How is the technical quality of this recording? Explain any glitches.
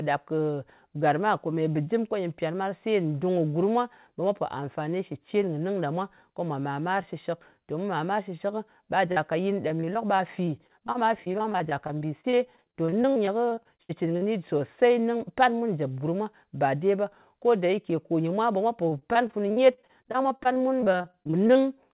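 The speech carries three packet-loss faults, with the band ending at 4 kHz, as a narrowband call codec like G.711 mu-law would leave it.

Short concealed packet loss at 9.12 to 9.18 s: about 40 ms of audio arrived too late to decode, so the receiver extended the preceding sound to cover the hole and then blended back into the real signal, leaving a brief smear or wobble.

Repeated packet loss (robotic sound) from 9.68 to 14.23 s and again from 18.89 to 21.57 s: dozens of gaps, at most 63 ms and 46 ms long, were each patched by extending the preceding sound. The patches fill roughly a fifth of each stretch, which makes the speech choppy, with fragments missing.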